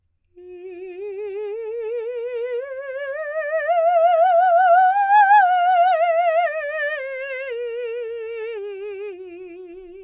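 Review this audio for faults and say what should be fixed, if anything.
Nothing needs fixing: the music comes through as a continuous, steady signal with no technical faults.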